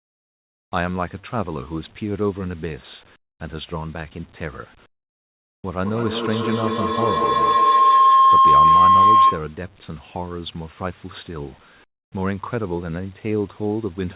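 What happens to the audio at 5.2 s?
From 4.86 to 5.64 s the real background is replaced by a steady, featureless hiss about 21 dB quieter. This is comfort noise in place of the background, likely from the sender pausing transmission. Unlike a dropout, the gap never falls to true silence.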